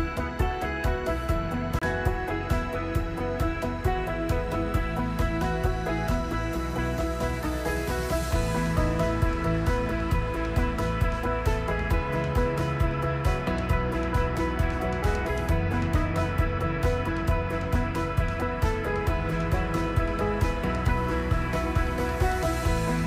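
At 1.79 s a CD skip occurs, lasting until 1.82 s. The laser lost its track and landed on a different turn of the disc's spiral. Playback mutes for about 30 ms, heard as a short gap. It then resumes abruptly from another point.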